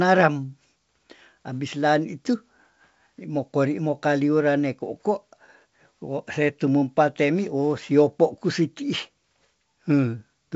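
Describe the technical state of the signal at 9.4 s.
At 9.4 s the speech is intact, carried cleanly through G.722 wideband telephone coding with no fault at that moment.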